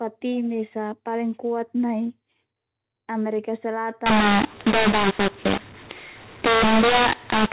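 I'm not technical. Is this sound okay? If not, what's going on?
No. The first four seconds sound like an ordinary phone call, with the usual muffled telephone quality. From 4.06 s to the end, the speech turns harsh and gritty, and the quiet gaps fill with hiss. This is a mu-law and A-law mix-up. Phone audio can be packed using one of two similar methods. Here it was packed with A-law but unpacked as mu-law. The loudness of every moment gets scrambled, and even silence comes out as noise.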